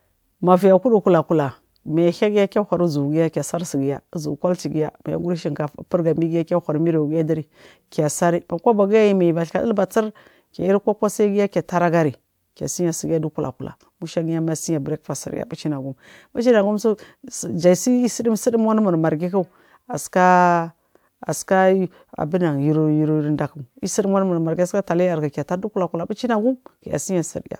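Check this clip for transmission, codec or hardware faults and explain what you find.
No transmission, codec or hardware faults can be heard; the speech signal stays continuous and stable throughout, with nothing in it that points to a problem in the chain that carried it.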